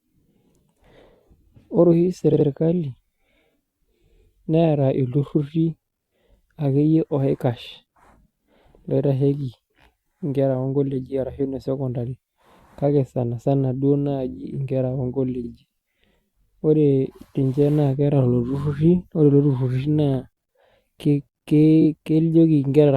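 Repeated frames at 2.32 to 2.46 s, 15.43 to 15.48 s (just after "duo naaji inkera") and 21.81 to 21.86 s: short stretches of the compressed speech stream were played again, so the same slice sounds twice or three times in a row. The first repeats a 70 ms block twice, adding 139 ms. The second repeats 46 ms once. The third repeats 23 ms twice. Each produces a brief stutter.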